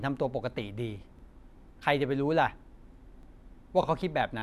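Overlapping chunks at 1.19 to 1.23 s and again at 3.23 to 3.28 s: the speech was handled in 2.0 s chunks, each starting before the previous one finished, so 44 ms replays at every join. It is heard as a brief stutter, recurring on that two-second spacing.

Repeated frames at 3.83 to 3.85 s: a 26.1 ms block plays a second time, which points to a single compressed frame being written or sent twice. The decoder replays that fragment, producing a short stutter, and lengthens the audio by 26.1 ms.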